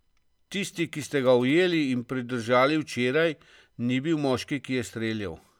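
From 0.78 to 1.74 s, GSM signalling bursts intrude. A nearby 2G phone's radio bursts get rectified, producing a galloping dit-dit-dit of short 217 Hz buzzes, roughly 25 dB below the speech.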